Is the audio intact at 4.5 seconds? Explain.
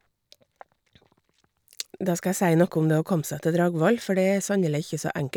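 Yes, the speech at 4.5 seconds plays through cleanly, with no dropout, click, distortion or other fault at that moment.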